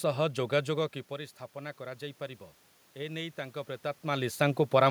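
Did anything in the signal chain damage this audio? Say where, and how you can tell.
Yes, automatic gain rising in call processing: from 1.08 to 4.86 s, after the input fell about 13 dB, the AGC slowly added about 5 dB, lifting speech and room noise together.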